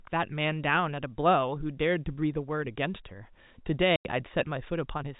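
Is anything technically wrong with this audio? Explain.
Yes. From 3.96 to 4.05 s the speech shows packet loss filled with silence. Data went missing in transit and the receiver played nothing in its place rather than concealing the gap, leaving a 90 ms hole, which fits three 30 ms packets. The speech stops dead at a hard edge and restarts at another. The telephone band limit of G.711 coding, nothing above 4 kHz, runs through the gap as well.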